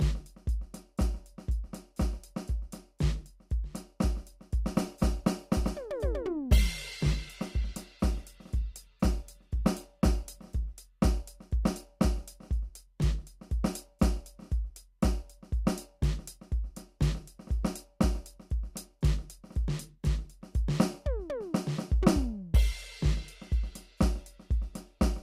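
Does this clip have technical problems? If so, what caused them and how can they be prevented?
Yes. An adaptive stream at a lower bitrate runs from 4.75 to 10.75 s. The player switched abruptly, with no gap, to a lighter version after the connection slowed, which fits a step from 64 to 24 kbit/s Opus. Codec artefacts rise until full quality returns. Preventing it means keeping enough stable bandwidth or a larger playback buffer so the player never needs to step down.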